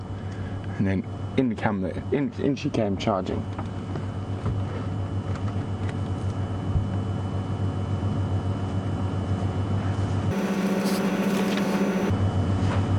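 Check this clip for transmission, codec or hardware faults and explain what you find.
One fault appears near the end. From 10.31 to 12.10 s, the audio is read two samples at a time (double speed): each sample pair is taken as one frame, so it plays 2x fast and 12 semitones higher. A spectrogram shows harmonics stretched upward an octave, and the waveform looks horizontally compressed.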